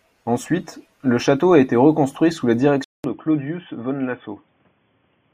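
At 2.84 s, just after "été reconstruit sous la", the recording most likely switched its input to a poorer device, and the speech stays on that device to the end. The new input cuts everything above 3.4 kHz, so the voice turns dull and boxy. The switch leaves a gap of about 200 ms, and after it the level drops by roughly 5 dB, with a new background noise sitting around 40 dB under the speech.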